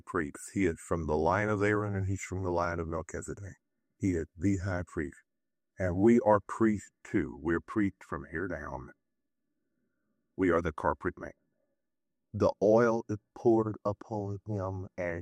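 Listening through the recording, nothing stood out as a technical problem at any point.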